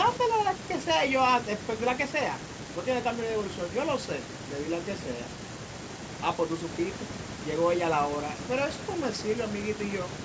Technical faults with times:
none

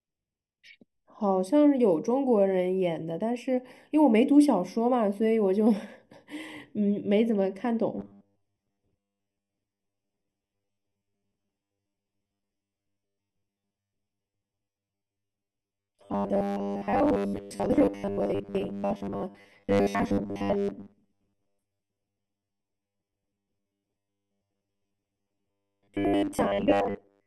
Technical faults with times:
0.00-27.26 channel delay (comb filtering)
7.99-27.26 robotic sound from repeated short buffers

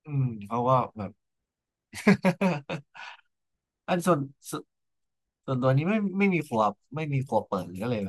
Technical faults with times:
none

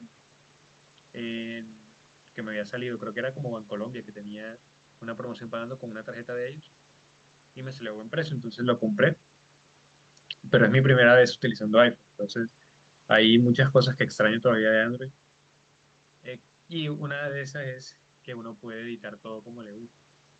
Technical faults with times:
12.98-14.97 automatic gain falling

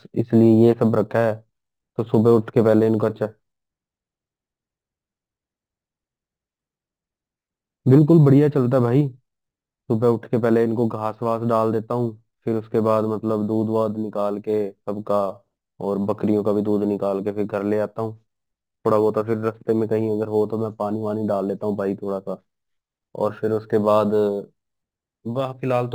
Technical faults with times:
0.00-25.95 crude rate conversion

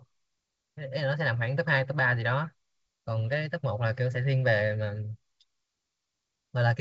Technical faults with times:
none

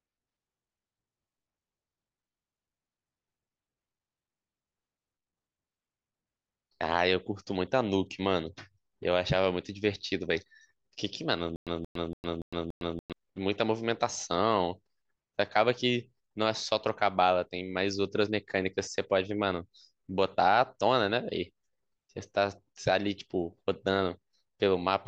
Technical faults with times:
11.56-13.13 stutter with silent gaps

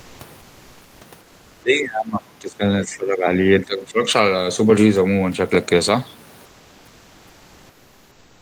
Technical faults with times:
0.00-0.19 comfort noise in place of the background
1.59-4.00 speech suppressed in double talk
6.45-8.42 comfort noise in place of the background

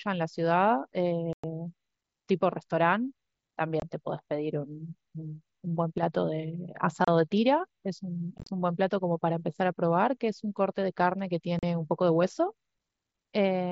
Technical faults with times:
1.33-1.44 unconcealed Bluetooth headset packet loss
3.80-3.82 unconcealed Bluetooth headset packet loss
5.98-6.03 one channel drops out
7.05-7.08 unconcealed Bluetooth headset packet loss
8.38-8.49 unconcealed Bluetooth headset packet loss
11.59-11.63 unconcealed Bluetooth headset packet loss

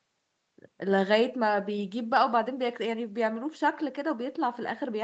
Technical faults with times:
none

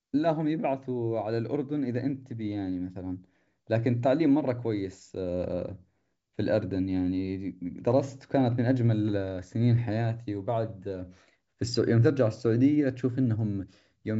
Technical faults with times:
none

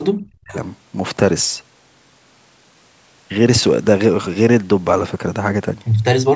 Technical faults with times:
0.14-0.56 speech suppressed in double talk

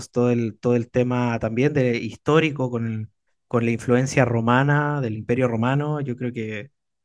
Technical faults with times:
none

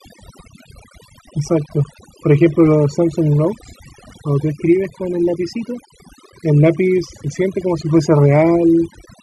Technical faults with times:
0.00-9.23 overdone noise removal

